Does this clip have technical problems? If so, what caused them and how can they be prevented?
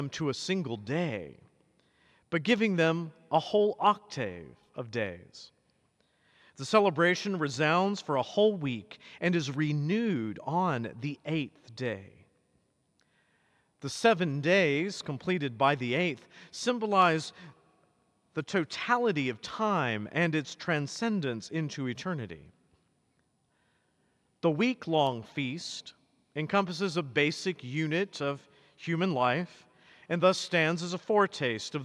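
No, there are no technical problems to report here.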